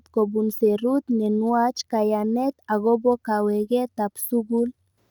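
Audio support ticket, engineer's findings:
No faults found in the speech recording. No action required on the audio path.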